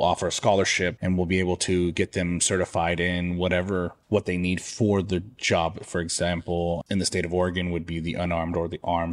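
No technical faults can be heard anywhere in the speech recording; the signal stays intact and continuous throughout.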